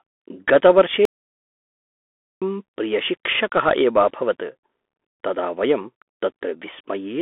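From the start, the speech carries a Bluetooth CVSD headset codec sound. Nothing passes above about 3.8 kHz, and the low end thins below 250 Hz. The adaptive one-bit steps cannot keep up with loud highs. S sounds turn scratchy over a granular hiss.

At 1.05 s comes an audio dropout to silence, lasting to 2.42 s. That is about 1.36 s of silence, with no room tone. The input was likely lost, perhaps through a broken link, while recording continued. Whatever was said there is gone.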